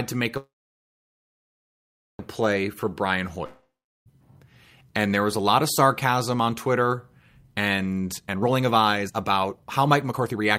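Just after "to make", from 0.37 to 2.22 s, there is a call audio freeze. It was likely caused by packets being held up so that the jitter buffer ran dry. The receiver carried the last sound on as a buzz or hiss that dies away, and about 1.71 s of the 1.82 s gap is silent or a low steady noise. When the audio resumes it picks up exactly where it stopped, so nothing is lost, but everything after it now plays 1.82 s later. On a spectrogram the final frame smears into a short horizontal band and then the display goes blank or nearly so. The waveform shows a decaying tail followed by a long flat stretch.

From 2.56 to 2.75 s a jitter buffer speed-up runs the sound at 116% speed with its pitch unchanged. The buffer was holding more than its target, so the receiver cut out about 40 ms as a series of short pitch-period snippets. The passage sounds hurried. The waveform looks compressed in time, while the spectrogram's harmonic spacing stays the same.

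Straight after, from 2.80 to 3.08 s, a jitter buffer slow-down does the reverse. The buffer was running low or had just raised its target, so 47 ms was added by repeating single pitch periods or bits of pause. Playback drops to 87% speed at the same pitch, which sounds drawn out. On the waveform the cycles stretch, and the spectrogram's features widen without any shift in pitch.

From 3.46 to 4.09 s comes a long network dropout. The likely cause is that no audio arrived, and 0.6 s of the sound is never played. The last sound is extended as a fading buzz or hiss, with about 0.38 s of silence or low steady noise, and the audio then rejoins further on. That leaves an abrupt jump in content. The spectrogram shows a smeared tail, then a dark gap, then a sudden onset.

The second speed-up spans 8.18 to 10.58 s at 135%, with about 1 s removed. It sounds clearly rushed, and it is the same time-compressed, pitch-stable pattern as the first one, sustained over about 2.4 s.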